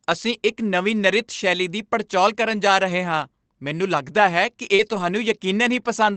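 At 2.55 to 2.57 s, a lost packet rebuilt from error correction: a 20 ms stretch turns briefly rougher and noisier with no gap, because a low-bitrate copy carried in the next packet was played instead. At 4.75 to 4.81 s, a short concealed packet loss: about 40 ms never arrived, and the decoder stretched the preceding sound across the hole before blending back. This produces a brief smear or wobble, unlike the coarse grain of the rebuilt copies. Overlapping it, from 4.79 to 5.01 s, 120 ms is again rebuilt from error correction, consistent with six separate 20 ms packets. The result is a longer, audibly grainier patch.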